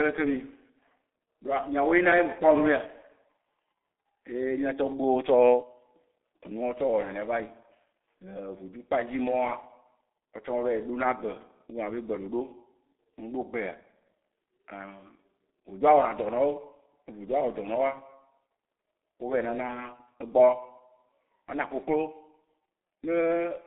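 A speech clip carried through the G.723.1 codec at about 6.3 kbit/s, a narrow telephone line of 250 Hz to 3.6 kHz, nothing above 3.8 kHz, heavily muffled, hoarse, blurred consonants throughout.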